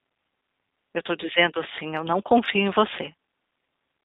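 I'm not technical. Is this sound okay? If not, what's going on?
No, it isn't quite right. From start to finish this speech has been squeezed through the G.729 codec, a compressed phone-call format. It keeps only the middle of the sound, roughly 200 Hz up to 3.7 kHz, so it's thin and boxy like an old phone line. Rather than sending the real audio, it sends a rough recipe for the voice and rebuilds it at the other end, which is why it comes out a bit gritty and robotic.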